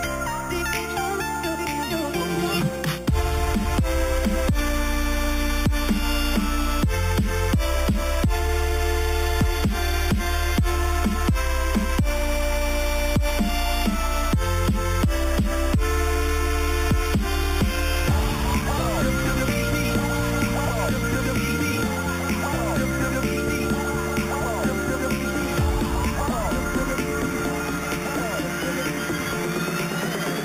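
A bright, metallic fizz rides on top of the sound for the whole clip, rising and falling with its level, and the lowest band of it moves the opposite way whenever the pitch moves. This is imaging from sample-and-hold upsampling: the audio was raised from 8 kHz to 44.1 kHz by repeating each sample with no smoothing filter, so mirrored copies of the spectrum sit above the original, the first filling 4 kHz to 8 kHz at about 16 dB below the signal.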